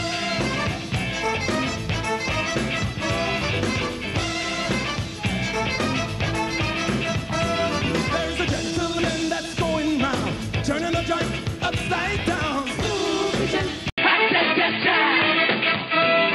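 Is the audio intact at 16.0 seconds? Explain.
No. From 13.90 s to the end, the input has likely switched to a poorer device. After an 80 ms gap, the sound narrows to nothing above 4.8 kHz and shifts level by roughly 5 dB over a new, faint noise floor. A plain filter wouldn't bring that gap, level shift and new noise.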